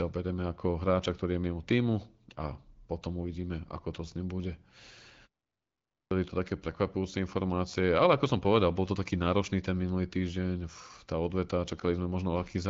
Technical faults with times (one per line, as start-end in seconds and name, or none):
5.55-6.11 clipped start after a pause